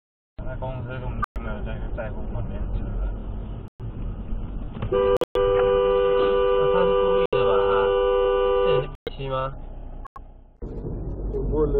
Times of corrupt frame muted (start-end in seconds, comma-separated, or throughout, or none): 1.22-1.37, 3.68-3.81, 5.17-5.37, 7.26-7.34, 8.95-9.09, 10.05-10.18